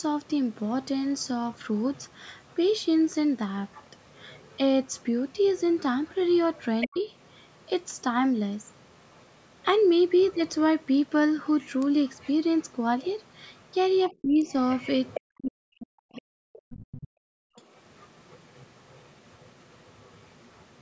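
From 0 to 2.85 s, 3.72 to 8.01 s, 8.65 to 15.21 s and 17.56 to 20.81 s, a faint second voice sits under the speech, about 25 to 35 dB down. This is likely the other side's voice leaking through: a loudspeaker echo the canceller left in the microphone signal.

At 6.87 to 6.96 s, 14.22 to 14.48 s and 15.19 to 17.11 s, the speech dips sharply by up to about 40 dB. This is likely speech suppressed in double talk, with the canceller attenuating both voices at once.

At 17.39 to 17.56 s, the room background drops by about 40 dB for roughly 150 ms. This is background gated by the echo canceller clamping the microphone.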